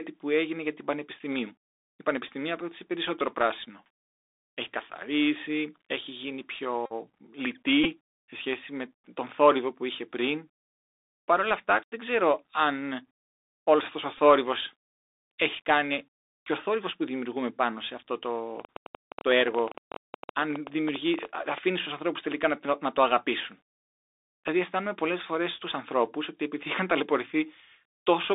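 The whole clip passes through a Bluetooth CVSD headset codec, so the sound is squeezed into roughly 300 Hz to 3.7 kHz. The one-bit delta coding at 64 kbps can't keep up on loud, bright moments, so the s sounds come out scratchy and a grainy hiss sits underneath.

At 2.28 to 2.32 s, just before "απέκτησε περισσότερο πράσινο", there's a Bluetooth headset packet repeated fault: lost packets get replaced by re-decoding the previous one, scattered over about 38 ms, which gives a quick buzzy stutter. Right after "καθαρίσει έχει γίνει", at 6.86 to 6.93 s, comes the longest one, a 45 ms steady buzz near 267 Hz. A shorter 15 ms repeat follows at 7.84 to 7.87 s, and at 14.18 s there's a brief 11 ms repeat of three packets.

From 18.6 to 21.59 s, between "δημιουργούμε πάνω σε αυτό" and "στους ανθρώπους τελικά να", a train of clicks ticks over the audio, about 11.7 per second, irregularly spaced, around forty in all, peaking about 5 dB above the signal. 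It's likely interference from nearby equipment.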